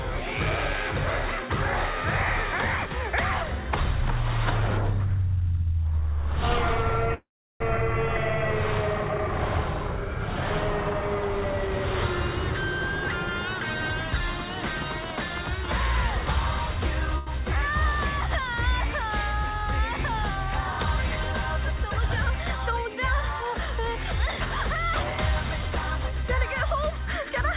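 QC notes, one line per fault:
5.95 to 8.76 s, DC step: the waveform's zero line jumps at 5.95 s and holds offset until 8.76 s, where it returns; each jump is a low thump while the sound carries on unchanged, as when an offset input is switched in and back out.
7.14 to 7.62 s, call audio freeze: the sound halts and is extended as a fading buzz that drops to silence for about 350 ms, filling 0.46 s in all, likely because delayed packets emptied the jitter buffer. Playback resumes where it stopped, so nothing is lost.
13.29 to 14.93 s and 22.99 to 24.50 s, jitter buffer speed-up: the audio runs 8% fast in the first stretch, dropping roughly 150 ms, and 2% fast in the second, dropping about 40 ms. Pitch stays the same, since the receiver trims tiny pitch-period slices to shrink an overfull buffer.
17.18 s, short stall from a late packet: the sound is held for 88 ms with a slight buzzy hang because the next packet had not arrived when due; the buffer stretched the last sound and then continued from the same point without losing anything.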